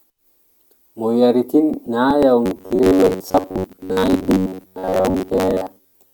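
Speech, with robotic sound from repeated short buffers from 2.46 s to the end of the clip. Over that stretch the voice becomes a rigid, metallic buzz locked at about 93.8 Hz that only loosely tracks the words. The likely cause is audio arriving too infrequently, with the playback side filling each gap by looping the most recent fragment of roughly 10.7 ms while most of the real audio is dropped. That loop rate sets the fixed pitch.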